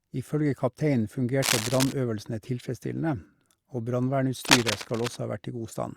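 A speech recording with two bursts of cable scratch noise, from 1.42 to 1.93 s and from 4.45 to 5.16 s, each a harsh rustling roughly as loud as the speech itself. The likely cause is a worn cable or connector being moved, its contact resistance jumping erratically. On a waveform these stretches show ragged, spiky clusters riding over the signal. A spectrogram shows dense, patchy broadband smears covering the speech harmonics.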